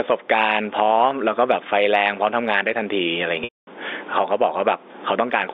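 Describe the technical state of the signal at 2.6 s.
At 2.6 s the speech suffers gain pumping, present throughout the clip. The gain swings by about 15 dB, pulling loud and soft parts closer in level and squashing the sound. The likely cause is input gain set far too high, with a fast limiter clamping every peak.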